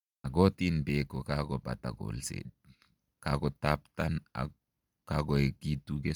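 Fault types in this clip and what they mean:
Bluetooth LC3 compression: a plainly audible breathy, grainy sheen overlays the speech's upper range throughout, where noise fill replaces discarded detail, likely from LC3 coding near 48 kbps. Unlike a plain low-pass, the band still reaches 20.2 kHz, so texture suffers, not treble.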